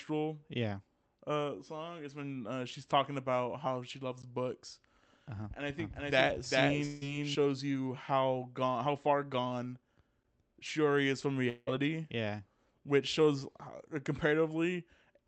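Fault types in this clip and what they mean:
gap between chunks: at 4.22 s and 10.23 s, a hard-edged hole of about 13 ms appears at each join between 6-second blocks of the speech.
doubled audio track: from 5.79 to 7.35 s, a copy about as loud as the original trails roughly 400 ms behind, likely from an out-of-step second capture path.
long network dropout: at 6.85 to 7.03 s and 11.49 to 11.69 s, a fading continuation fills lost stretches of about 160 and 180 ms, likely from packets never arriving.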